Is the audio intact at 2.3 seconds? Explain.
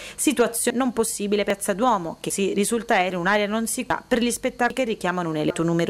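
No. At 2.30 s the sound jumps abruptly, losing about a fifth of a second: likely audio missing between chunks at a chunk handover.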